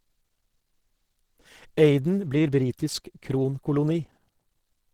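Opus compression runs throughout the speech: the sound is muffled and hoarse, with a grainy, rough upper range, plainly audible from start to end. This likely comes from the Opus speech-oriented hybrid mode, which fits a low bitrate around 16 kbps.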